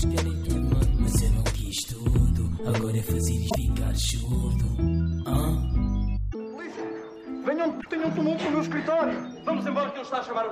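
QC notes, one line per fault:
3.46–3.56 s, 6.28–6.35 s, 7.77–7.87 s: damaged data in a compressed stream. Corrupted frames throw the decoder out of sync while it hunts for the next header, leaving brief glitches under 0.1 s each.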